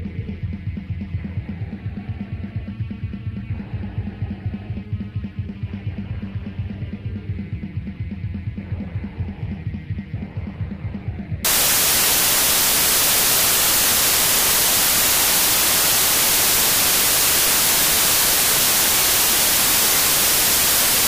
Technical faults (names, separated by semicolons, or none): samples built from the wrong bytes